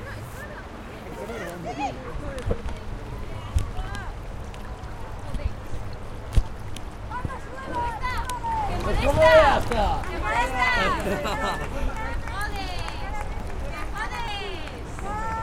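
Sound recording with small jumps at 1.12, 3.88, 6.32, 8.24, 12.52, 13.4 and 14.28 s, each skipping roughly 40 ms, the last nearer 100 ms, likely a dropped buffer (overrun).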